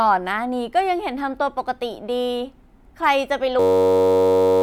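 At 3.60 s the speech gives way to a system hang loop that runs to the end at 4.63 s. The machine or its driver froze while the sound hardware kept replaying the same slice of its ring buffer. That slice is only 10.67 ms long, which fits a 512-sample buffer, and it repeats close to a hundred times. Looping that fast turns it into a steady buzz at about 94 Hz, and roughly a second of real audio is lost.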